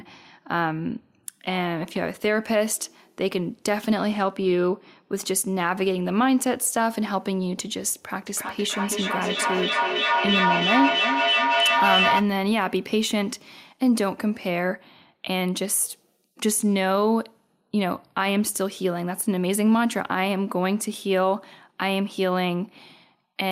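From 8.26 to 12.32 s, feedback echo between two devices. Speech returns about every 300 ms. Repeats pile up, peaking about 1 dB above the speech.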